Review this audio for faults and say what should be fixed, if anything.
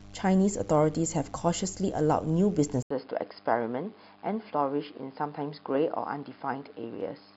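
The input was likely switched to a poorer device at 2.82 s, with an 80 ms silence at the changeover. From there to the end the speech sounds duller and boxier, with nothing above 5.1 kHz, drops a few decibels, and gains a faint new background hiss. Locking the recording to one chosen microphone, and stopping the system from switching inputs automatically when devices connect or change profile, would prevent this.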